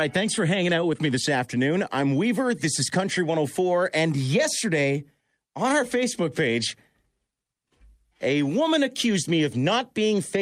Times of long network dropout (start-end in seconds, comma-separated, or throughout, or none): none